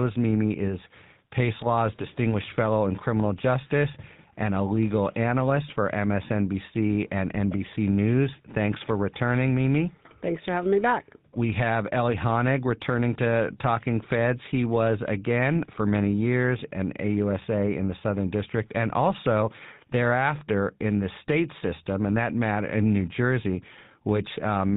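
From start to finish the speech has passed through the GSM full-rate codec, whose character fits its 13 kbps rate. The codec rebuilds the voice from a vocal-tract model fed by evenly spaced pulses, discarding two of every three excitation samples and cutting everything above 4 kHz. The plainly audible result is a dull, band-limited telephone sound with a buzzy, gravelly roughness across the whole clip.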